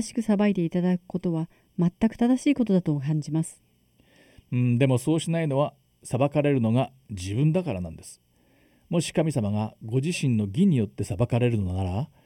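It's a speech clip, and the whole thing has channel delay (comb filtering) running through it, so the voice sounds hollow and a bit phasey from start to finish. One channel lands late by something under half a millisecond, and when the two get summed to mono, anything they share cancels at regularly spaced frequencies. The first notch sits around 1.5 kHz, with more fixed dips spaced evenly above it, which scoops out presence and leaves that hollow, tubey colour.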